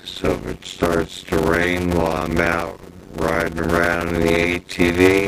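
Throughout, there's a block size mismatch (padded): short blocks, which fits 256 samples, get zero-filled, giving a 91.9 Hz buzz and audio running at 0.533 speed, timbre intact.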